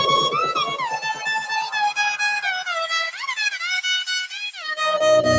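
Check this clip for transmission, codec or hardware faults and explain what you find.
A speech-style noise suppressor is acting on this sound and causes both faults heard here. The call microphone path, with nothing above 8 kHz, is not one of them.

Noise suppressor applied to music or sounds, throughout: a processor tuned to keep a talker and discard background is treating steady, sustained parts of this audio as noise. It keeps adjusting its gain, so the level swings by around 10 dB as it decides moment to moment what to keep. Onsets pass, but sustained portions and decays are pulled down, giving a pumping, fluttering, thinned-out character across the clip.

Sound cut by the noise suppressor, at 0.93 to 1.27 s and 4.27 to 4.66 s: in these two stretches the suppressor judged the sound to be noise and cut it harder than elsewhere, by about 9 dB at the deepest point in the first and about 14 dB in the second. 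Because the attenuation tracks sustained energy rather than transients, the sound there sinks in level or its tail is cut short, leaving an audible dip that lasts a few hundred milliseconds.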